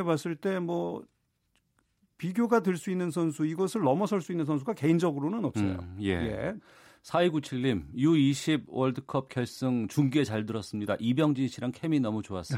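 No technical faults can be heard in this recording.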